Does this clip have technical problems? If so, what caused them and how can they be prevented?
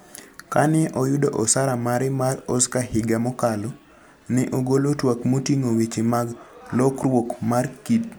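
No, there are no technical problems in this recording.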